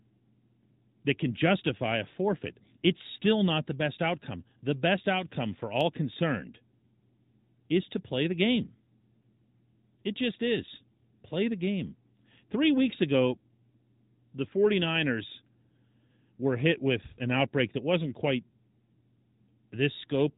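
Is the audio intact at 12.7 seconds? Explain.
No. At 12.7 seconds, as throughout, the AMR narrowband mobile codec cuts everything above 4 kHz and its pulse-driven vocal-tract model leaves a buzzy, synthetic edge, which separates it from a plain low-pass filter.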